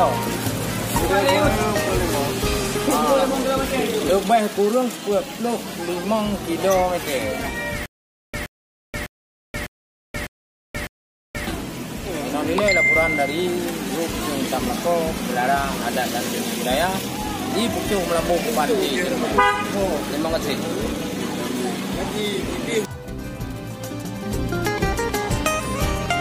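From 7.86 to 11.47 s the audio breaks into a stutter with silent gaps. A 123 ms fragment repeats six times, each followed by about 479 ms of dead digital silence, so the burst returns on a steady 602 ms cycle. The likely cause is a stalled player or stream re-sending its last fragment at each retry before running dry. Unlike a simple dropout, the same slice keeps coming back, and the material that belonged in those gaps never plays.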